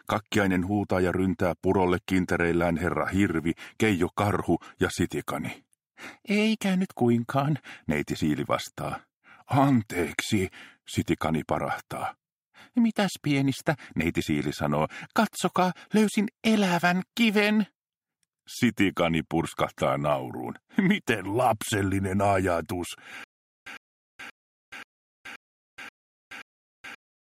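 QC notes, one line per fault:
23.24 s to end: stutter with silent gaps. The stream likely stalled and replayed its last buffered fragment on each retry, so a 106 ms burst repeats seven times every 530 ms with 424 ms of digital silence between, and the intended audio is lost.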